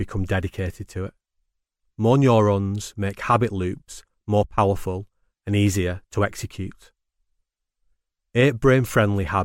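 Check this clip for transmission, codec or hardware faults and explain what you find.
Nothing here points to a transmission, codec or hardware problem, so there's nothing to flag in this bit of speech.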